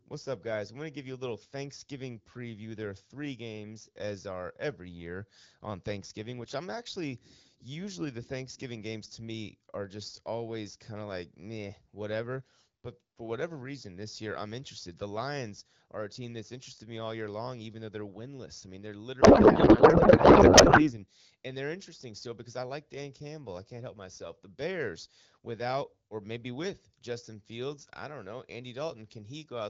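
Speech, carried over AMR wideband with the light coloration of a mid-rate HD Voice link, hits a codec payload misread from 19.21 to 20.94 s, between "winless I mean they're" and "and they're interesting still". The receiver unpacks octet-aligned AMR frames as bandwidth-efficient ones, so the speech becomes warbling noise rather than dropping out or smearing as packet loss would.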